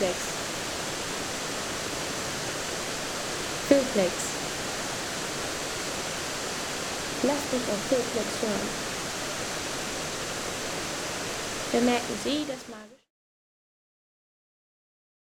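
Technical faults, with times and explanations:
No technical faults can be heard in this clip.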